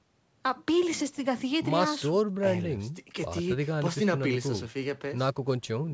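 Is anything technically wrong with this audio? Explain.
No, nothing is technically wrong with this audio.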